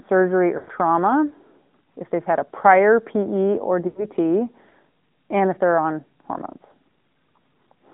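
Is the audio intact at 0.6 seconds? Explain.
No. From 0.58 to 0.70 s the sound runs through lost AMR speech frames: the decoder, missing about 0.1 s of data (which fits five 20 ms frames), repeats the last good pitch and vocal-tract settings at falling gain. The speech smears into a drawn-out warble and sags before recovering roughly.

The same moment also carries the AMR narrowband mobile codec's damage. The line passes only about 150 Hz to 3.5 kHz. The speech has the buzzy, synthetic texture of a pulse-excited vocal-tract model at a mid rate, consistent with about 10.2 kbps.

Channel delay (comb filtering) is present there as well. One channel trails the other by a fraction of a millisecond, and the mono sum cancels at evenly spaced frequencies, the first notch falling around 3 kHz. This gives the speech a hollow, phasey colour.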